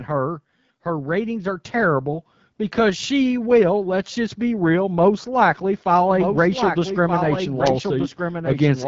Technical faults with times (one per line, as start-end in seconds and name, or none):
0.00-8.87 AMR wideband (HD Voice) codec
0.83-3.11 automatic gain rising
6.11-8.87 doubled audio track